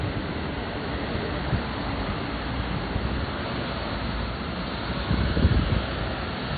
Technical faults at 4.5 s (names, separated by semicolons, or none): MP3 compression